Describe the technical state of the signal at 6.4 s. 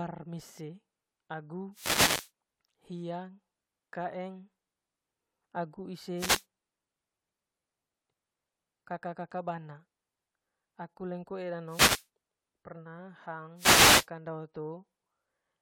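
A wireless microphone noise hit runs from 6.15 to 6.45 s: the FM radio link fades, letting receiver hiss swish over the speech, unlike a digital dropout's silent gap.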